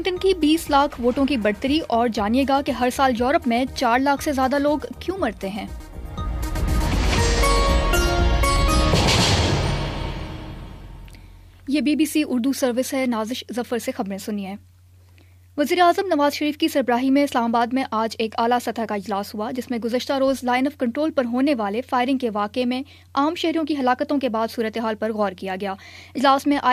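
No technical faults can be heard anywhere in this audio; the signal stays steady and intact throughout.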